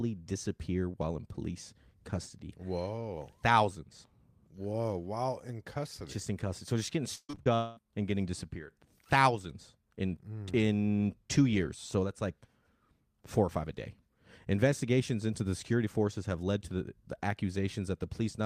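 From 7.15 to 7.48 s, right after "just getting", packets went missing four times in quick succession, the longest gap about 133 ms. The receiver patched each hole by extending the preceding sound, so roughly 63 percent of that span is synthetic, giving choppy, robotic speech with about 200 ms genuinely lost: classic repeated packet loss.

Between 7.55 and 7.79 s, a long network dropout is the likely cause. About 220 ms of audio never arrived, and the gap is filled for about 217 ms by a smeared continuation of the last sound rather than silence, a buzz that fades before speech resumes at "and getting disappeared", with the missing portion simply gone.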